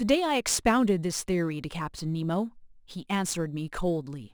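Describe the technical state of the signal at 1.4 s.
At 1.4 s you're hearing crude rate conversion, present throughout: 48 kHz squeezed to 44.1 kHz by nearest-sample picking, leaving a gritty, inharmonic fizz roughly 25 dB under the speech.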